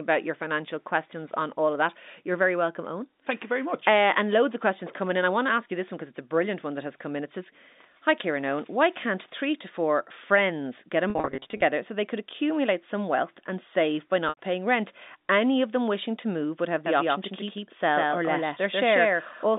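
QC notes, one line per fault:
11.1–11.62 s and 14.29–14.37 s, packet loss with pitch repetition: packets dropped and the receiver filled each gap by repeating the last pitch period. In the first event, after "four friends get a" and before "so they could accumulate", 290 ms went missing in runs of up to 50 ms scattered over 520 ms, giving a stuttering, buzzy, held quality. The second, after "wealth and save by", loses 80 ms before "paying rent" cross-fades back in.
16.86 s to end, doubled audio track: a second full-band copy of the audio, likely from a slower capture path, is mixed in at about the same level, roughly 150 ms behind the original. From just after "to move would have", each syllable is followed by a dry, uncoloured repeat that blurs the speech into a slapback smear. The copy appears abruptly and runs until the clip ends, sitting inside the same narrow telephone band as the original.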